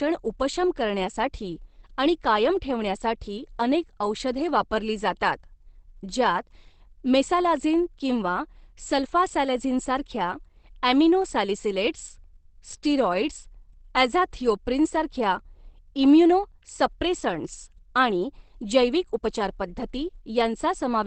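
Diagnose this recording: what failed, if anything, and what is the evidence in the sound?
Throughout, the speech is muffled and hoarse, with nothing above 8.4 kHz: likely Opus compression at the codec stage, in SILK mode, fitting about 16 kbps.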